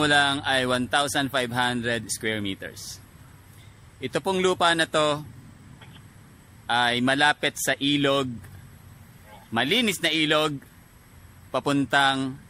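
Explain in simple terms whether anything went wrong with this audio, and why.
Nothing went wrong with this audio. At no point does anything in the sound suggest a technical problem.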